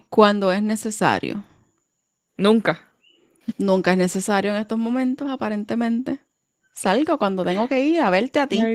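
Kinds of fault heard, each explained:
Opus voice compression: plainly audible coding damage runs through the whole speech clip, which fits Opus in hybrid mode at about 16 kbps. Below 8 kHz, linear prediction with a coarsely coded excitation makes the voice hoarse and faintly robotic. Above it, a thin transform layer codes the top band. On a spectrogram, harmonics look blurred and the top band patchy, changing in blocks that fit 20 ms frames.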